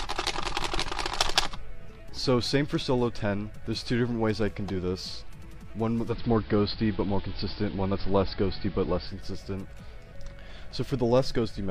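Digital radio blending to analogue, 6.04 to 9.18 s: the receiver lost the digital stream and cross-faded over 134 ms to the station's AM broadcast. The level shifts by about 3 dB, and a faint hiss sits roughly 30 dB down.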